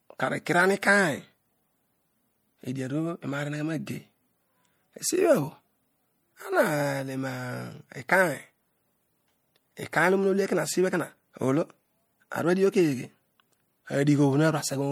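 All the way through the speech there's plainly audible coding damage, and it's likely MP3 compression at a low bitrate, something like 64 kbps. The encoder has been short of bits, so it throws away detail its hearing model rates as unimportant, and at this rate that loss is easy to hear. The top end still reaches about 21 kHz, so the damage isn't a dulled treble but the degraded texture in the sound itself.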